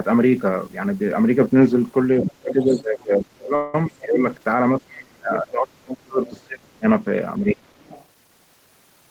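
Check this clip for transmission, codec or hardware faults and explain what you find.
The clip has three faults, two consistent with an echo canceller struggling during a speakerphone call, plus one network stall.

Other side's voice leaking through at 2.23–2.30 s, 2.62–2.82 s and 7.49–8.06 s: echo (about 10 to 25 dB down), likely incomplete echo cancellation, showing as weak, ragged extra harmonics on a spectrogram.

Speech suppressed in double talk at 2.29–4.21 s, 4.77–6.86 s and 7.39–7.80 s: the voice dips by up to roughly 30 dB, likely both sides ducked together, leaving visible envelope troughs in the waveform.

Call audio freeze at 3.55–3.75 s: a 184 ms fading buzz fills a gap, likely an empty jitter buffer; it shows as smeared, decaying spectral bands, then speech resumes without loss.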